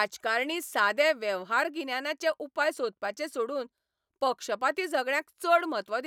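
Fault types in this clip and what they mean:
No technical fault can be heard anywhere in this speech recording, with the signal holding steady throughout.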